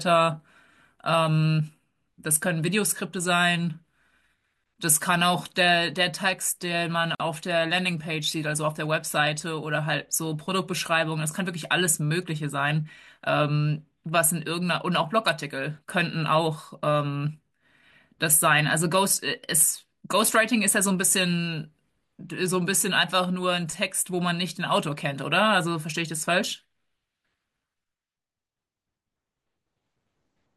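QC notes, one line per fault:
7.15–7.20 s, gap at a join of encoded pieces: a 48 ms gap cuts the speech with smeared edges. The speech then resumes exactly where it stopped, so unlike a dropout nothing is lost.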